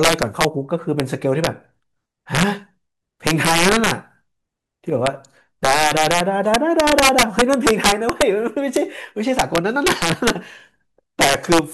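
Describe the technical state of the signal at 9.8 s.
At 9.8 s, as throughout the speech, integer overflow is present: the signal is driven about 7 dB past the integer limit, and instead of clamping, peaks wrap to the opposite sign. Around one percent of samples flip this way, giving harsh cracks on louder syllables.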